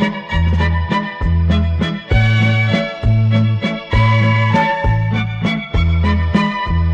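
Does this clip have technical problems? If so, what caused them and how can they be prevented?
No, the signal shows no technical faults anywhere in the clip, so there is nothing here that needs a cause traced or a fix applied.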